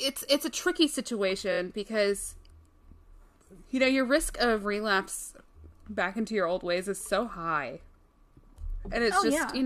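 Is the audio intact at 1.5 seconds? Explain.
No, there's a repeated-frames fault from about 1.51 to 1.58 s. One compressed block, which fits a single 23 ms frame, plays three extra times, so the speech stutters briefly and runs about 70 ms longer.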